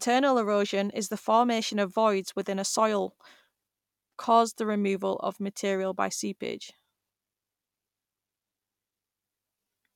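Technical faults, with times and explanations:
Nothing in this speech recording stands out as a technical problem; it all just sounds as it should.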